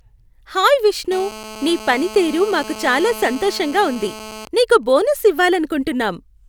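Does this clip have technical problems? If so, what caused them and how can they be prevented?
Yes. From 1.12 s to 4.42 s a hard, raspy buzz sits under the speech, pitched at about 217 Hz and thick with harmonics, about 16 dB below the speech and unrelated to it. This is GSM phone buzz: a 2G phone in a call nearby transmits in bursts 217 times a second, and the audio circuitry rectifies each radio pulse into an audible click train. Keeping phones switched off or in flight mode, well away from microphones, cables and preamps, prevents it.

From 4.42 s to 5.56 s the steady buzz breaks into even ticks with a longer 217 Hz buzz twice a second, somewhat quieter at roughly 20 dB under the speech. These are GSM signalling bursts: with the phone's user silent during the call, the handset sends only brief groups of radio bursts, and the circuit rectifies each group into this pattern. The same remedy applies, along with shielded, balanced cabling that rejects radio energy.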